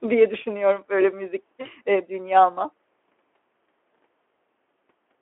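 At 1.61 to 1.69 s there is VoIP packet loss concealed by the speech codec. About 40 ms of the stream is missing, which fits two lost 20 ms frames. The decoder fills the hole by stretching the last pitch and vocal-tract shape at falling gain, so the speech smears into a brief, fading buzzy tone or coloured noise. Unlike a plain dropout, there is no clean silence, and the voice stays weak or distorted for a moment after it resumes, over the light coding damage of the narrowband Speex line.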